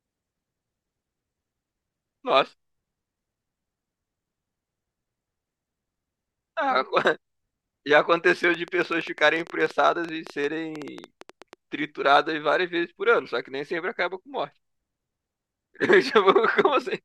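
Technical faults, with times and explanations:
8.44 to 11.54 s, train of clicks: a burst of around thirty sharp, similar-shaped ticks arrives at about 9.4 per second, spaced unevenly rather than in a steady rhythm. Their peaks stand a few decibels above the speech, so they cut through clearly and keep going in the gaps between phrases. The likely source is electrical interference from nearby equipment or a faulty connection or power supply injecting brief pulses into the signal path.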